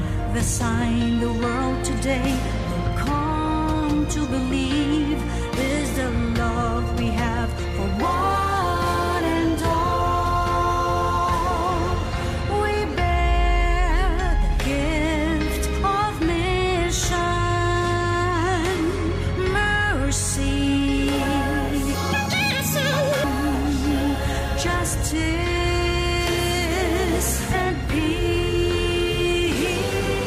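Right around 21.94 s, and lasting until about 23.24 s, the audio suddenly lurches into double speed and jumps a full octave up, 12 semitones, because it's read two samples at a time. What's happened is the reader is swallowing pairs of samples as if each pair were one frame, like it thinks there are two channels or wider samples. It comes out with a chipmunk pitch.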